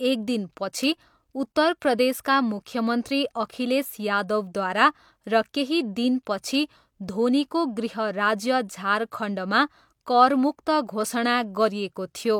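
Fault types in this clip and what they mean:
Nothing stood out on listening to this speech recording.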